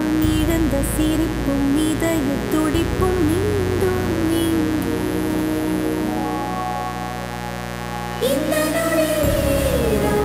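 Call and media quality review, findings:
Mains buzz, present for the full clip. Steady raspy buzz sitting not far below the sound itself, on a 60 Hz mains base. Probable component: dimmer, rectifier or unshielded line injecting switching spikes twice per cycle. Unlike smooth ground hum, harmonics extend into several kHz.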